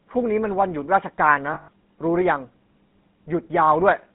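It's a short speech clip that's been squeezed through the GSM full-rate codec, and it shows. Everything sits in a phone-line band of roughly 150 Hz to 3.7 kHz, and the plainly audible buzzy, gravelly grain comes from the pulse-driven vocal-tract model that fits a 13 kbps full-rate stream. There are also lost GSM frames from 1.54 to 1.68 s, about 140 ms, which fits seven dropped frames. The decoder keeps replaying the last good frame, so the sound hangs as a rough, metallic ring before normal decoding resumes.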